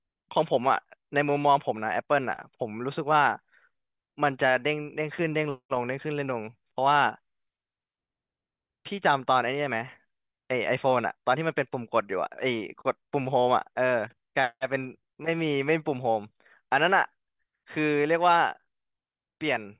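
Nothing in this speech recording stands out as a technical fault, so there's nothing to flag anywhere along its timeline.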